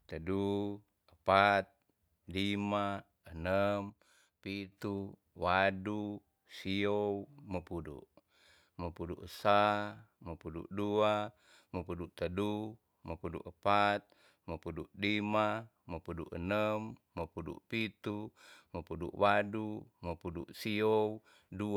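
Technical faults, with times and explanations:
3.90–4.72 s, one channel drops out: right after "lima enem" the speech falls abruptly by about 6 dB, likely because one stereo side vanished before the mono sum.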